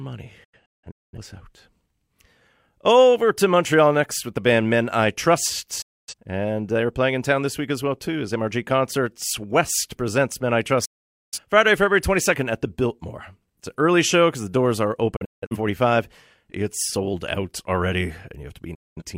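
Digital broadcast dropout mutes the speech at 0.44, 5.82, 10.85, 15.16 (after "because the doors are") and 18.74 s, losing 0.2 to 0.5 s each time. Failed frames are muted behind about 8 ms fades, leaving flat waveform gaps and blank spectrogram bands. At 0.44 and 15.16 s these are several short holes.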